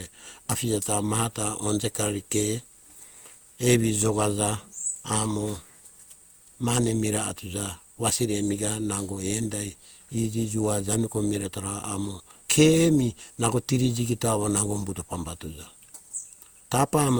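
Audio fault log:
throughout, generation loss: the speech sounds swirly and hollow, more than the bitrate alone would explain, with a watery smear across consonant attacks, though content still reaches 20.1 kHz. The likely cause is repeated lossy coding, with the texture pointing to Opus at around 64 kbit/s applied about four times over. Each decode and re-encode requantises on a shifted frame grid, so the noise piles up.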